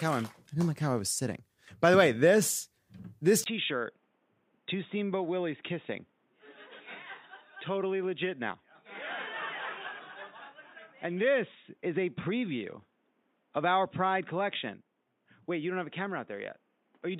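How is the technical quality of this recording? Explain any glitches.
The recording has one clear problem. At 3.44 s, after a gap of about 20 ms, the sound turns duller, about 10 dB quieter, and boxy, with nothing above 3.8 kHz and faint new background noise. This likely means the input switched to a poorer device. A plain filter would not also shift level and noise.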